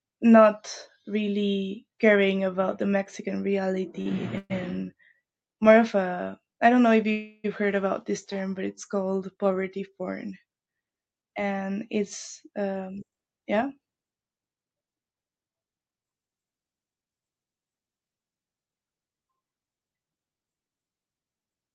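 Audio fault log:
4.01–4.08 s: short stall from a late packet. One packet arrived late and the jitter buffer briefly ran dry. The receiver held the last sound for about 42 ms until the packet came, then resumed from the same point, so nothing is lost but a sound lingers slightly too long. Unlike the freezes that follow, it is too short to fade or drop toward silence; it reads as a hitch rather than a pause.
4.38–4.52 s and 7.11–7.46 s: call audio freeze. Packets were likely held up in transit, emptying the jitter buffer. The receiver extended the last sound as a fading fill, about 122 ms in the first case, ending in roughly 20 ms of silence, and about 327 ms in the second, between "I don't know if" and "heard about this". Playback then continues where it stopped, so a gap is added and nothing is missing. The fading fill and its length separate these from the brief stall at 4.01 s.
12.46–13.21 s: jitter buffer speed-up. 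After "and it's", the receiver found more audio queued than it wanted and shed the excess by removing about 70 ms in many pitch-period-sized slices. The sound runs at about 109% speed with the pitch unchanged, so it comes across as hurried rather than higher. That is the opposite of the stall and freezes: nothing is held or stretched, and the passage is squeezed to cut the delay.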